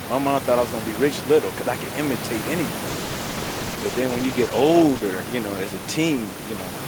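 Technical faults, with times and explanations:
2.88–5.09 s, call bitrate drop: just after "because I could imitate", the sound turns rough and dull, holding at its worst for about 2.1 s until "you know as a". The sound fits a fall from around 32 kbps to about 13 kbps. The call's bandwidth estimate fell, so the encoder had far fewer bits per frame, coded the spectrum more coarsely and trimmed the top end. The room noise underneath sits about 12 dB below the speech.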